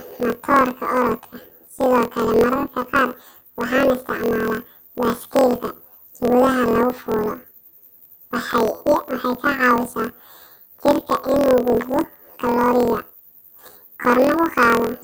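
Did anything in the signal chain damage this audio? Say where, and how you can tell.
Yes. Planar audio read as interleaved runs throughout the speech. The sample-format conversion stage read 24 ms blocks of all-left-then-all-right samples as alternating pairs, so each block plays twice at double speed. The speech sits an octave high with a 41.7 Hz flutter.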